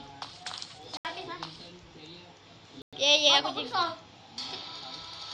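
The audio drops out to dead silence twice, at 0.97 s for about 78 ms and at 2.82 s for about 107 ms, then picks straight back up. That pattern points to a Bluetooth stall, likely from radio interference holding up packets. The headphones' buffer ran empty, so playback simply paused until the resent data arrived. The gaps are short but clean, with no fade, which is exactly what an empty buffer sounds like.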